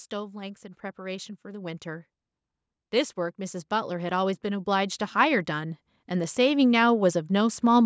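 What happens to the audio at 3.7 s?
At 3.7 s the speech and the background noise beneath it are swelling together, climbing steadily by about 9 dB from 3.16 s to 7.81 s. This is automatic gain rising: the call's gain control judged the input too quiet and gradually turned it up.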